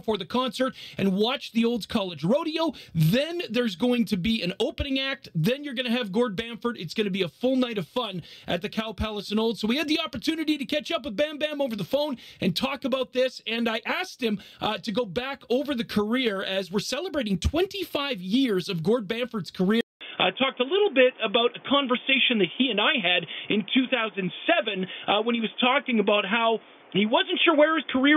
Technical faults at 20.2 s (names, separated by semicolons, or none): input switched to a poorer device